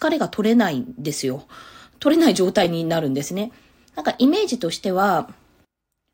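Speech, with chunks out of order at 2.64–2.66 s and again at 4.12–4.15 s: an 11.61 ms chunk, which fits a 512-sample buffer at 44.1 kHz, lands one chunk late each time. Nothing's missing, but the swap leaves a brief jumbled flick.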